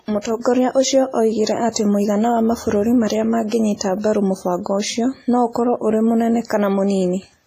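Heavy WMA compression runs through the whole of this speech clip, likely from an early WMA 1 encoder working at a low rate that fits 24 kbps. The sound is ringing and washy, with a hiss that swells and fades along with the signal, because quantisation noise from the long transform blocks is smeared across tens of milliseconds. Weaker spectral lines have been zeroed out, and nothing remains above 14.6 kHz.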